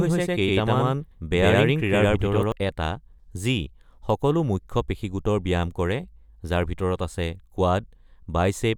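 From the very start until 2.52 s, the speech carries a doubled audio track: a second full-band copy trails around a tenth of a second behind at roughly equal level, likely from a duplicate capture path. Unlike an echo, it has no decay or room colour, and it cuts off abruptly.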